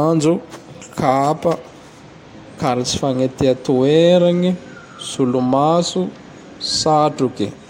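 No technical faults can be heard anywhere in the speech. Nothing in the recording calls for a timestamp or any further comment.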